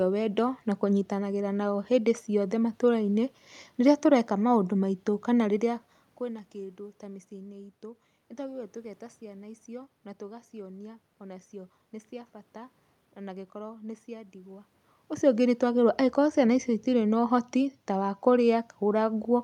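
No technical faults are present.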